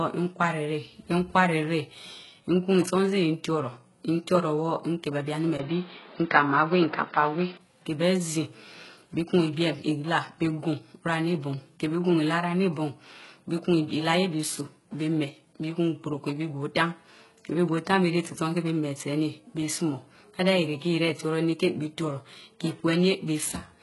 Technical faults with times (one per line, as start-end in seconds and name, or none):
0.00-23.82 HE-AAC compression
5.57-7.59 input switched to a poorer device